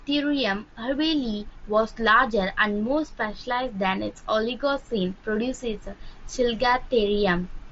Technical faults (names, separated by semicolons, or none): none